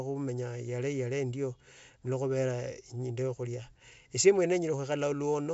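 No technical faults can be heard anywhere in this speech recording. The G.722 wideband telephone coding is working as intended, with nothing above about 7.7 kHz and at most a faint trace of codec texture in the upper band.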